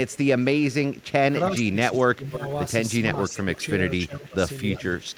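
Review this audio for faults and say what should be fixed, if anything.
Echo leak is audible at 0.07–1.06 s, 2.34–2.39 s, 3.28–3.66 s and 4.71–5.09 s as a delayed copy of the speech about 0.32 s late. It sits about 30 dB below the speech at first, rising to about 15–20 dB below later. The likely cause is a far-end loudspeaker whose echo canceller let part of its microphone pickup return. A fixed, discrete delay distinguishes it from room reverberation, which smears continuously. Better canceller convergence or headset use at the far end would prevent it.

Speech suppressed in double talk appears at 1.51–2.41 s, 3.55–3.59 s, 4.06–4.40 s and 4.78–4.83 s. The speech dips by up to roughly 15 dB while the other side talks, likely because the canceller attenuated both talkers. Tuning double-talk detection to be less aggressive would prevent it.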